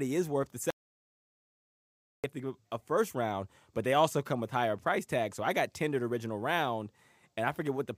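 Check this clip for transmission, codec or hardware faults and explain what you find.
One fault is present. An audio dropout to silence runs from 0.70 s to 2.24 s. The input was likely lost through a disconnected device, a failed link or a stray mute while recording carried on, so 1.53 s of speech is gone. The speech cuts out mid-flow into silence with no room tone, then comes back mid-flow.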